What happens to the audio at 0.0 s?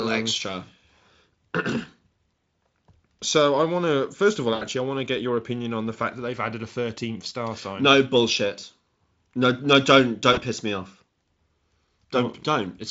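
Nothing goes wrong at 0.0 s; the audio passes through the Speex codec intact, with at most faint codec damage at that moment.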